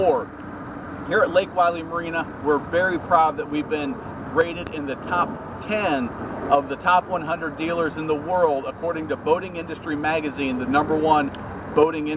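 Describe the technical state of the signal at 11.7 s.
At 11.7 s the audio is intact, with no fault, only the ordinary narrowband character of a G.711 A-law call path that leaves nothing above 4 kHz.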